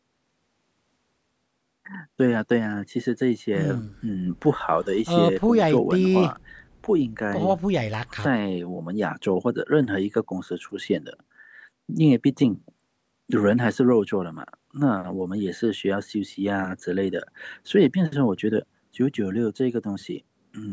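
A speech recording, passed through a call's microphone processing with nothing above 8 kHz, has nothing technically wrong with it.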